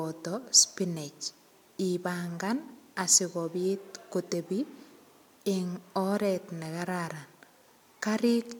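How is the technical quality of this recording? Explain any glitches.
No technical glitches can be heard anywhere in this speech recording. There is nothing in it that calls for an explanation.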